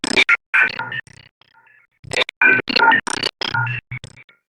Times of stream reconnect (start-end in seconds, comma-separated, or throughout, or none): none